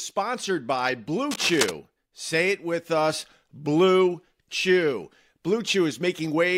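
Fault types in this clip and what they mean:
Cable scratch noise: From about 1.30 to 1.70 s, a dense, ragged burst of scratching and rustling sits over the speech for roughly 0.4 s, only around 5 dB below it, so it is clearly audible rather than buried. The likely cause is a worn cable, plug or control being moved. Its contact resistance jumps around rapidly, and those fluctuations pass straight into the signal as uneven bursts of noise.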